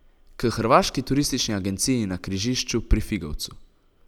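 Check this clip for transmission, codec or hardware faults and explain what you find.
Nothing stood out on listening to the speech here.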